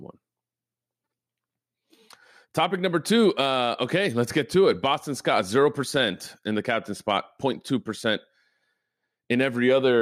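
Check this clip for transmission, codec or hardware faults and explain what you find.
Nothing in this clip points to a fault of any kind. The speech carries on without any event that needs explaining.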